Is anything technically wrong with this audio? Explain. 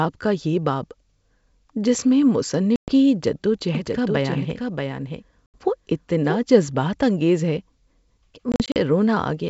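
Yes. Two kinds of fault are present in this G.722 wideband telephone call.

Packet loss on an ADPCM call occurs three times. At 2.76–2.92 s, after "جس میں", about 120 ms drops out. At 5.46–5.57 s, 80 ms is lost. At 8.52–8.77 s, 120 ms is lost in short gaps of up to 40 ms. Each gap is hard-edged silence. The decoder's predictor and step size then drift from the sender's, so speech returns with brief, slight distortion.

A doubled audio track runs from 3.75 to 6.37 s, between "جد و" and "جذبات انگیز ہے". A dry, full-band copy about 5 dB quieter trails roughly 0.7 s behind. It starts and stops abruptly. A second, slower capture path is the likely cause.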